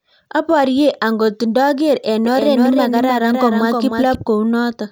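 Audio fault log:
2.25–4.15 s, doubled audio track: after "angot ndoker eng", a dry copy trails about 300 ms behind, a few dB quieter, with abrupt edges, likely from a slower second capture.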